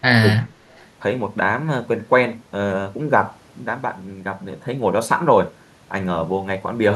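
Speech suppressed in double talk, from 0.0 to 0.47 s: the speech dips sharply, by around 20 dB at its deepest, over roughly 300 ms in all. This is likely an echo canceller that, with both sides talking, couldn't separate the talker from loudspeaker echo and attenuated everything.

Echo leak, from 0.7 to 0.89 s: a faint delayed copy of the speech, arriving 217 ms behind the original and sitting very low, some 35 dB under the speech. The likely cause is a far-end echo canceller letting residual loudspeaker pickup through, which is then sent back.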